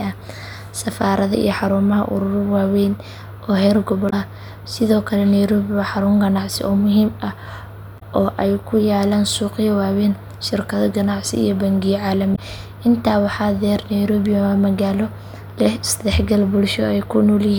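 At 4.06, 7.96 and 12.32 s, just after "iyo bangiyo", damaged data in a compressed stream makes the decoder lose sync for about 70 ms.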